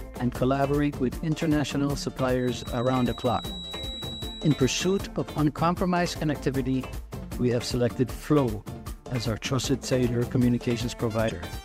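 Right at the tail, from about 11.27 to 11.31 s, there's a short glitch from damaged data in the compressed stream, where corrupted bytes made the decoder misread frames and lose sync.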